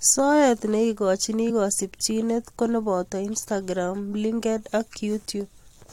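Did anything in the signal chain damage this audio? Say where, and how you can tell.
Yes. At 1.47 to 1.51 s there is a small forward jump just before "kasimchineet ko", with about 20 ms of audio gone. These are compressed frames skipped at the codec decode stage. Whole frames are not played, so the audio jumps ahead by their length.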